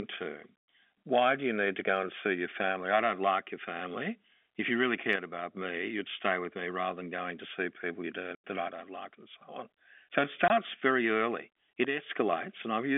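From 5.16 to 5.57 s the level of the speech suddenly sags by about 6 dB, then recovers. This is one channel dropping out. One stereo channel was likely lost, so the mono sum keeps only half of the shared signal. Anything only in that channel vanishes too.

At 8.35 s, after "to see people you", the audio cuts to dead silence until 8.43 s. Then it resumes on "that I". This is packet loss filled with silence. About 90 ms went missing, which fits a run of 10 ms packets. The edges are hard.

Right after "that I", from 8.68 to 9.41 s, the same 6 dB drop returns. The channel dropout holds for most of a second.

From 10.48 to 10.50 s a second, shorter gap of silence appears, about 20 ms long, just before "very early it". It is brief but still has hard edges.

From 11.85 to 12.09 s the channel drops out a third time, with the same sudden fall of about 6 dB.

Throughout, the G.711 telephone band limits the sound to roughly 300 Hz to 3.5 kHz.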